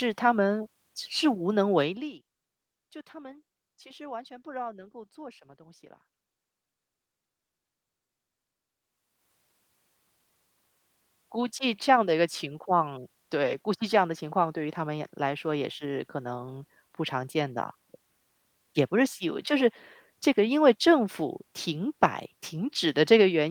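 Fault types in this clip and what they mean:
No fault types are present in the clip, so there is nothing to explain about what they mean.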